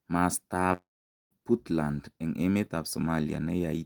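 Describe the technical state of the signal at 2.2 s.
At 2.2 s the speech signal is intact, with no dropout, clipping, distortion or other fault to be heard.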